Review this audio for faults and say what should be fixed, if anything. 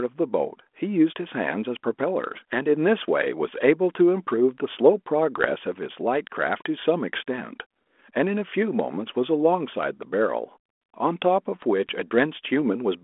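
Bit errors on an ADPCM link cause pops and rough bursts at 5.38 to 5.51 s and at 12.47 s. Each flipped bit upsets the decoder's step size and predictor. The damage rings on briefly, with level jumps. Protect the link with error checking and concealment of bad frames.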